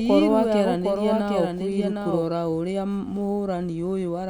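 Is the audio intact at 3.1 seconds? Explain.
Yes, at 3.1 seconds the audio is intact, with no dropout, click, distortion or other fault at that point.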